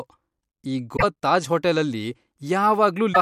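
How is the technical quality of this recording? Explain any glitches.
The recording has two glitches, at 0.93 to 1.04 s and 3.10 to 3.17 s, both from damaged data in the compressed stream. The decoder misreads the corrupted frames and loses sync, so the speech briefly breaks up.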